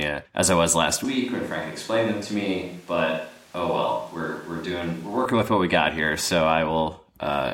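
A speech clip whose voice suddenly turns roomy and hollow at 1.05 s, losing bass and dropping roughly 5 dB, while background noise rises to around 25 dB below the speech. It snaps back to the close sound at 5.25 s. This is a switch to a distant microphone: the close microphone's signal likely failed or was left out for that span, so the recording falls back on one placed farther away that picks up more room.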